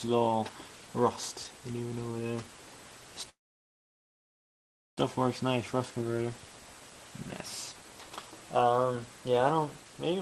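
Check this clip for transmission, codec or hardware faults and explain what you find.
One fault stands out, a call audio freeze from 3.29 to 4.99 s. The sound stops abruptly, a short fading tail trails off, and then there is about 1.6 s of silence before the audio resumes exactly where it left off, with nothing skipped. The likely cause is packets stalling in transit, so the jitter buffer ran dry and the receiver stretched the last sound into silence. This added about 1.7 s of delay. The band-limited top end, reaching about 12 kHz, fits an Opus call path at a modest bitrate.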